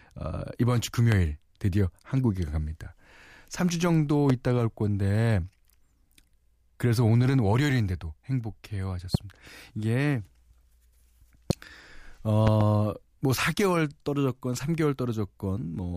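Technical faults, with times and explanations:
1.12–1.15 s, 4.30–4.32 s, 9.15–9.17 s, 11.50–11.53 s and 12.47–12.63 s: loud pop. Each is a brief, sharp pop about 15 dB above the speech, which carries on underneath. The last is two pops in quick succession. The likely cause is a sudden voltage step or pulse from a plug, switch, static or driver glitch, added to the signal and shaped by the circuits after it.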